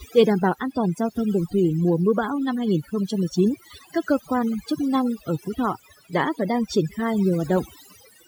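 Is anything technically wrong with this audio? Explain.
Yes. Overdone noise removal affects the speech for the whole clip. A noise reduction stage was set too aggressively: it pulls individual frequency bands far down, or shuts them off, whenever their level sits close to its noise estimate, and the quieter parts of the voice are caught along with the noise. The background drops and breaks up into twinkling specks.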